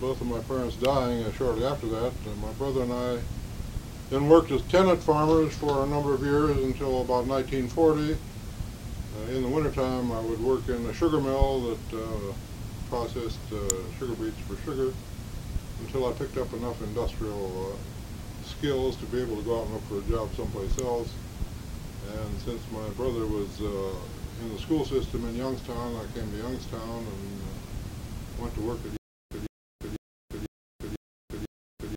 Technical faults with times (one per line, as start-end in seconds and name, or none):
0.85 electrical switching spike
13.70 electrical switching spike
20.79 electrical switching spike
28.97-31.97 stutter with silent gaps